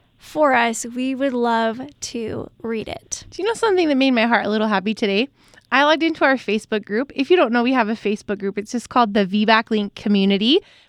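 No dropouts, glitches, distortion or other technical faults can be heard anywhere in this speech recording.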